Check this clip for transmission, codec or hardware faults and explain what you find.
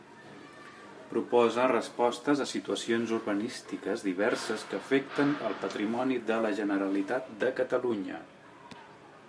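Nothing stands out here: the speech comes across without any dropout, glitch or distortion that would point to a problem in transmission, coding or hardware.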